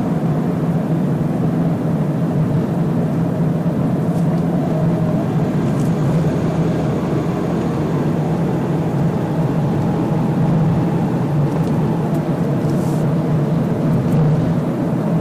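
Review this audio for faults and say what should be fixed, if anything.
Hard clipping runs through the whole recording: the signal was driven about 13 dB past what some stage in the chain could pass, so roughly a tenth of the samples hit the ceiling and were sliced flat. Those squared-off peaks generate strong harmonics high in the spectrum, and at this depth of overload every loud moment in these everyday sounds carries a harsh, gritty fuzz rather than occasional crackle. To prevent it, lower the gain before the overloading stage and leave enough headroom that peaks stay below full scale.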